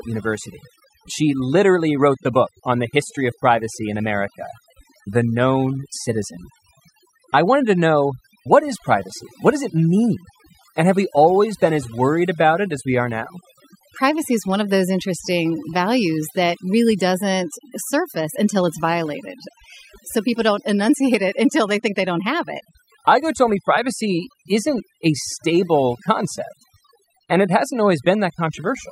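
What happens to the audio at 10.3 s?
At 10.3 s the speech is under overdone noise removal, which runs through the whole clip: an over-strong noise reducer cuts bands near its noise estimate, leaving the background as twinkling near-silence.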